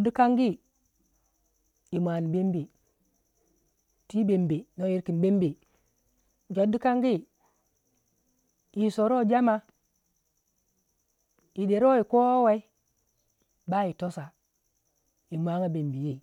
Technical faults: none

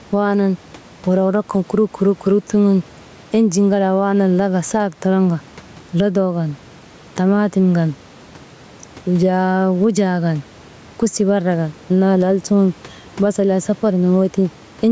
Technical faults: gain pumping

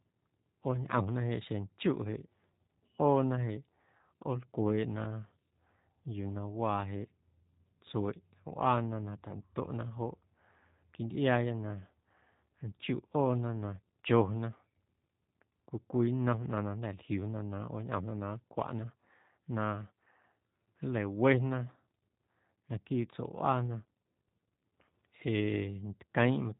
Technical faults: G.729 codec

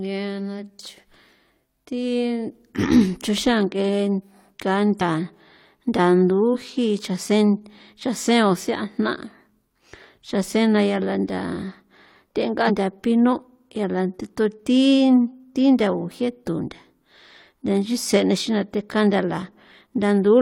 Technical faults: compressed frames skipped

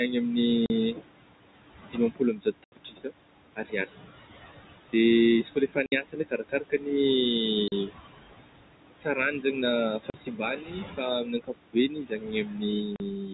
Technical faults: noise suppressor artifacts; packet loss filled with silence; speech cut by the noise suppressor

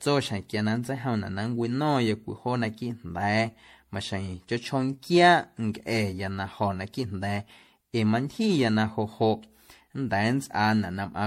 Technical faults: generation loss

